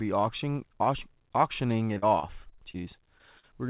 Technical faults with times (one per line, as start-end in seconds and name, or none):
1.94-2.76 repeated packet loss (robotic sound)
3.18-3.45 short concealed packet loss